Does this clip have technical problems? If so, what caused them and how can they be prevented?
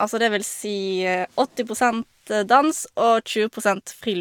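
No, no technical faults heard.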